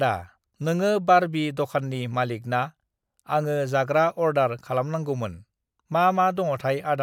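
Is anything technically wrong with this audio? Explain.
No, nothing technically wrong is audible in this speech recording.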